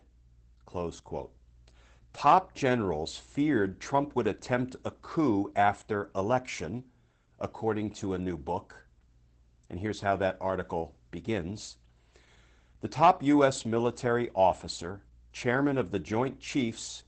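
Throughout the clip the speech sounds muffled and hoarse, with a faintly robotic edge and nothing above about 8.7 kHz. This is Opus voice compression in its SILK linear-prediction mode, limited to wideband and coding the excitation coarsely, which fits a bitrate near 12 kbps.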